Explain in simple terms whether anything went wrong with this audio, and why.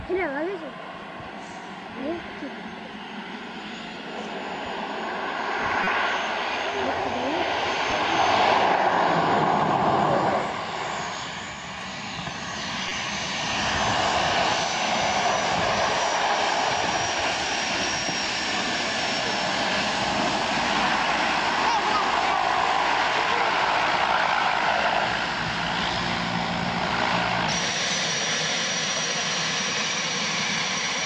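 Short chirps or noise bursts at 5.84 to 5.88 s, 7.86 to 7.92 s and 12.87 to 12.92 s are corrupt frames decoded: damaged compressed data played anyway, misplacing sound energy.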